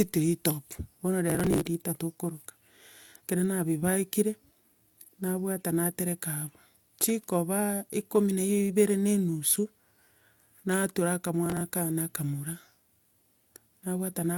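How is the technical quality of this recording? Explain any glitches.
The speech has two short bursts of processor overload crackle, from 1.30 to 1.65 s and from 11.46 to 11.61 s. In each burst the processor repeatedly missed its deadline for short buffers of around 5 ms. The late buffers were skipped rather than filled, so the audio is broken by a rapid run of hard-edged gaps. These gaps are heard as gritty tearing over the speech, and it stops as soon as the load clears.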